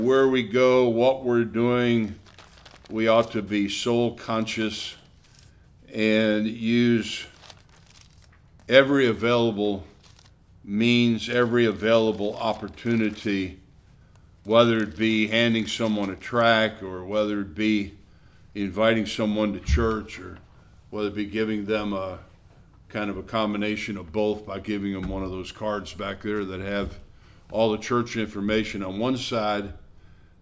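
No faults are audible anywhere in this recording.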